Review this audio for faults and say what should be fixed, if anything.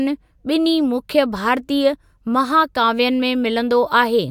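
Nothing needs fixing, as no technical faults can be heard anywhere in the speech recording.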